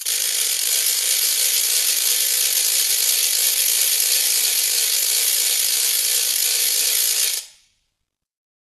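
A music clip with plainly audible HE-AAC compression all the way through. The treble sounds gritty and metallic, and nothing sits above about 12.4 kHz, likely from a very low bitrate around 16 kbps.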